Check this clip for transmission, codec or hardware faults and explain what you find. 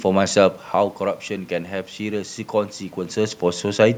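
No transmission, codec or hardware faults can be heard in this speech. The room noise belongs to the recording itself, and the level shifts around half a second in and again near 3 s are the talker moving relative to the microphone.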